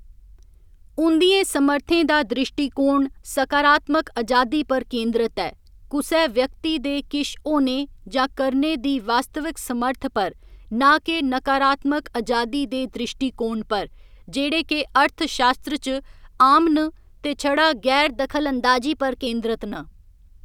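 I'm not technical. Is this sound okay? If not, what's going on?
No, not quite. From about 18.07 to 19.27 seconds, near the end, the speech suddenly runs about 5.8% fast and sits roughly a semitone higher, then drops straight back to normal. That's a drift correction step: software keeping two clocks in sync likely nudged the playback rate in one jump to top up or empty its buffer, so speed and pitch shifted together for just over a second.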